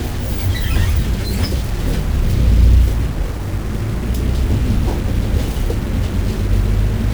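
A stuck bit, likely a data bit held at a fixed value by a broken line or converter, runs through the whole clip, shifting about half the samples by a step of roughly -30 dBFS. The sound carries harsh, buzzy distortion, and quiet stretches fill with noise.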